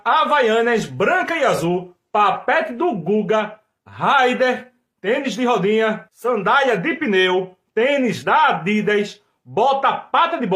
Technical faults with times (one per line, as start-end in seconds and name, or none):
none